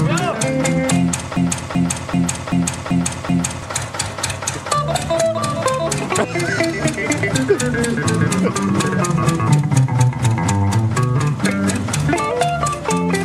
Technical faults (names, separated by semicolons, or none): broken-record loop